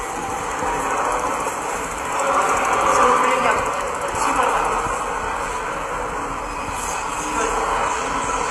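An everyday-sound recording whose treble sounds gritty and metallic throughout, with the top ending sharply around 15.4 kHz. This is likely HE-AAC compression, rebuilding the upper bands from copied lower ones, which fits a low bitrate near 24 kbps.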